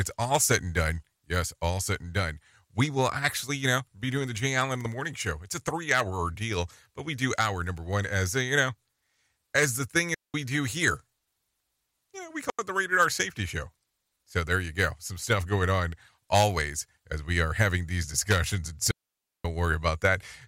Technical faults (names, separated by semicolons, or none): digital wireless dropout